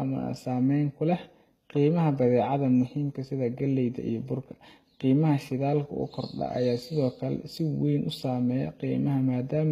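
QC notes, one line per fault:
Throughout: HE-AAC compression, likely the cause of the plainly audible damage here. The treble is rebuilt by copying lower bands upward, so s sounds come out gritty and lispy. It's all cut off at 14.9 kHz, which fits a bitrate around 20 kbps.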